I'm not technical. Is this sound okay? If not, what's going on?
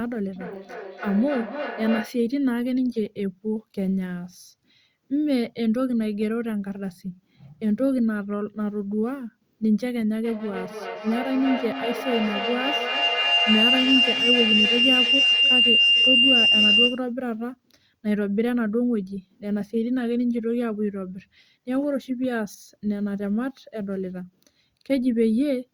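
No, there's feedback howl, twice: a low hum from 0.36 to 2.23 s, then a shrill whine around 3 kHz from 10.24 to 17.11 s that ends up louder than the speech. Two devices on the call are looping sound back, each trip around the loop taking about a third of a second.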